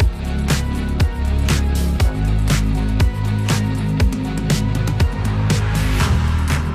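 Nothing in this one catches the ear as a technical fault: no dropouts, glitches or stray noises turn up at any point in the recording.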